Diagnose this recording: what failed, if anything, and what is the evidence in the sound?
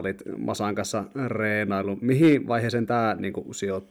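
A gain stage ran about 4 dB past its full-scale limit, causing hard clipping: from 2.11 to 2.35 s, just after "kanssa reenailu", the speech peaks are sliced flat, and those squared-off tops add high harmonics that are heard as a brief harsh crackle on the loudest syllables.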